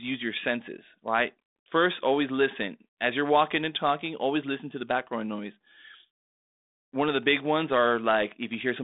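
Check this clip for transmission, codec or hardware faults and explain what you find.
Nothing here points to a transmission, codec or hardware problem: the speech comes through a G.726 ADPCM link at 32 kbit/s, held to roughly a 200 Hz to 3.7 kHz telephone band, with only the light coding texture you'd expect at that rate.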